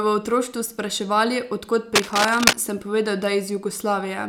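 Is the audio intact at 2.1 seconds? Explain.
No. From 1.95 to 2.56 s, a dense, uneven scratching and rustling rides over the speech at roughly the same loudness as the speech. This is cable scratch noise, likely from a worn cable or connector being moved so that its contact resistance jumps rapidly and injects irregular bursts of noise.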